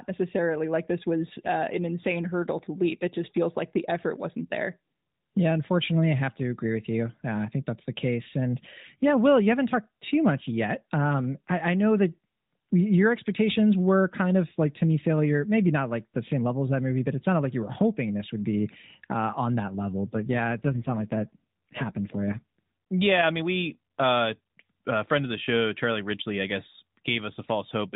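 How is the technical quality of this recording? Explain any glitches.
Speech coded with narrowband AMR, cut off above 4 kHz with light codec roughness, has one glitch of about two and a half seconds.

An AMR rate drop runs from 20.19 to 22.59 s, starting after "uh on that level" and recovering before "yeah I mean we". The link forced the mobile codec to a lower bit rate, diverting bits to error protection. The bandwidth stays the same and nothing drops out, but the voice turns buzzier and more synthetic, which fits a fall from 12.2 to 5.9 kbps.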